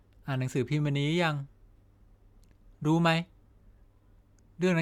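No technical faults can be heard anywhere in the recording; the speech signal remains continuous and stable throughout.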